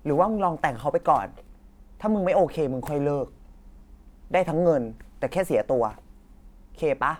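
Speech recording, with no technical fault to be heard anywhere in it. There is nothing to point to at any moment and no cause to assign.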